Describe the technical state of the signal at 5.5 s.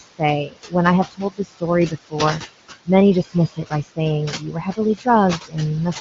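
At 5.5 s the noise suppressor is cutting speech. Between 5.39 and 5.55 s it misreads part of the speech as steady noise and lowers those bands along with the background, by about 16 dB at the deepest, so roughly a tenth of a second sounds swallowed and faint.

The same noise suppressor artifacts run through this moment as they do across the whole clip. The room noise, sitting about 9 dB below the speech, is pulled down by about 16 dB frame by frame. The remnant pumps with the speech.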